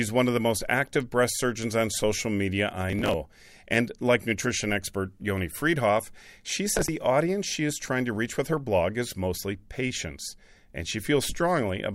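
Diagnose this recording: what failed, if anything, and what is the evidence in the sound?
The driver and buffer stage fell behind: the processor missed a run of deadlines for buffers of roughly 10 ms and skipped them, leaving hard-edged gaps. That is processor overload crackle, heard from 2.90 to 3.14 s after "surgeons on social media" and from 6.77 to 6.88 s before "audience she is trying".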